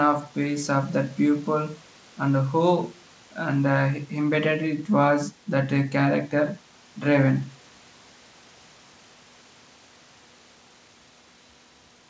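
Nothing in this speech recording points to a technical fault, and the band stopping at 8 kHz fits its passage through a wideband call codec such as G.722.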